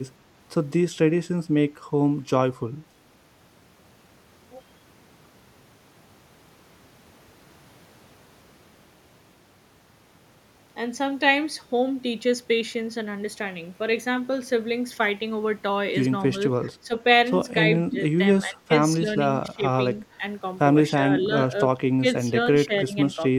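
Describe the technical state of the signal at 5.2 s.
At 5.2 s the signal is intact, with no audible fault at that point.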